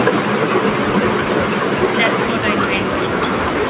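A speech recording carried over a call in which the far end played the audio through a loudspeaker and no echo canceller removed it, so an echo with no canceller runs throughout: every phrase returns roughly 400 ms later as a thinner copy about 16 dB below the speech, in a band that stops at 4 kHz, consistent with a narrowband G.711-type call path.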